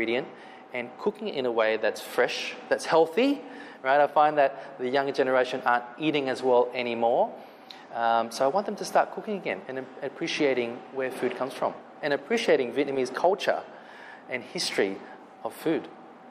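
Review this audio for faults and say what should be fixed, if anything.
No faults; nothing to fix.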